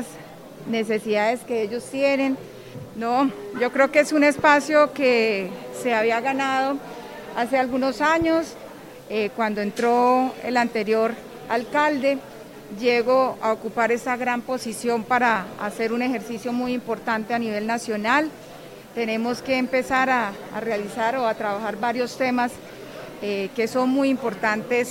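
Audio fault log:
No faults heard anywhere in this clip.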